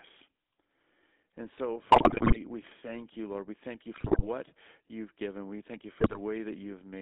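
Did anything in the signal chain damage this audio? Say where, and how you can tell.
Yes. The codec stage did the most pervasive damage. The speech went through the GSM full-rate codec, which fits its 13 kbps rate. That codec rebuilds the voice from a vocal-tract model excited by sparse regular pulses, so the whole clip carries a buzzy, gravelly roughness confined to roughly 250 Hz to 3.5 kHz.

The radio link added GSM bit errors. Corrupted bits reached the decoder's filter, pitch and gain values, so frames came out spectrally bent or abruptly loud, heard as squawks, pops and gargling. This happens at 1.92–2.38 s, just before "we thank you", at 3.94–4.26 s, between "thank you" and "you've given", and at 6.00–6.19 s, after "thank you".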